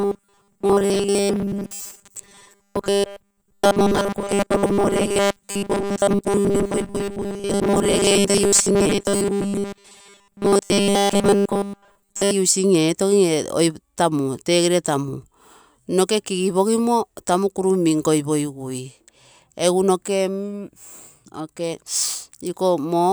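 A speech clip whose audio likely arrived too seldom, so the software kept repeating its last short buffer to fill the gaps, producing robotic sound from repeated short buffers from 0.01 to 12.33 s. A rigid, metallic buzz at 200 Hz, fitting a repeated slice about 5 ms long, runs through that stretch, with about 70% of it repeated.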